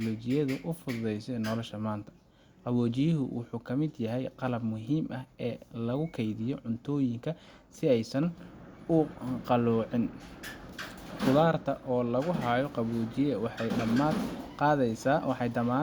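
No technical faults can be heard anywhere in the recording.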